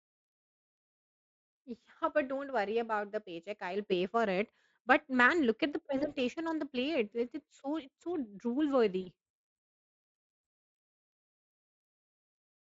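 Two short bursts of VoIP packet loss concealed by the speech codec, at 5.97 to 6.14 s and 9.01 to 9.07 s, each consistent with about 40 ms of missing audio. The decoder extrapolates the last pitch and filter at falling gain, so speech smears into a brief buzzy tone or coloured noise that fades, under the light Speex coloration.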